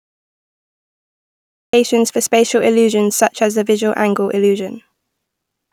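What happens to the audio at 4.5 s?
Nothing goes wrong at 4.5 s; the speech carries on intact there, with no dropout, click or distortion.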